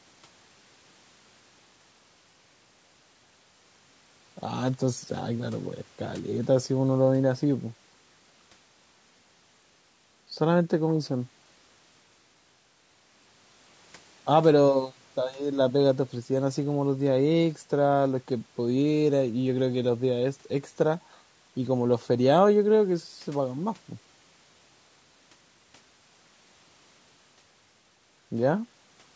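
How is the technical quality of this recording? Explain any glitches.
The quality is noticeably degraded throughout by low-delay AAC compression. Across the whole clip the speech sounds rough and grainy, likely from AAC-ELD, whose short frames blur pitch harmonics. At a rate that fits roughly 32 kbps, a spectrogram shows smeared harmonics with noise filling the gaps. Nothing appears above 8 kHz, which matches the call's microphone processing.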